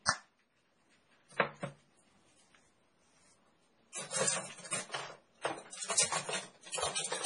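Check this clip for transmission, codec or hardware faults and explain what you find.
One codec fault runs through the whole clip, and it is most likely heavy MP3 compression.

MP3 compression, throughout: nothing is present above 10.6 kHz, a hard treble cut-off. The damage is heavy, which fits a very low bitrate of around 24 kbps. With so few bits, the encoder zeroes weak frequency lines, and these switch on and off between frames. The result is a watery, swirling texture, metallic chirping on bright content, and smeared attacks.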